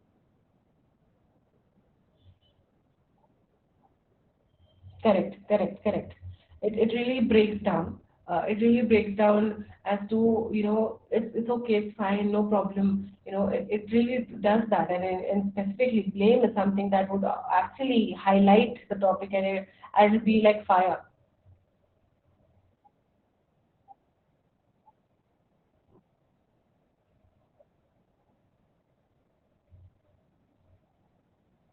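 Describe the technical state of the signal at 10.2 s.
At 10.2 s the speech sounds muffled, hoarse and slightly robotic, with nothing above 4.3 kHz: Opus voice compression runs throughout, narrowband SILK coding consistent with about 8 kbps.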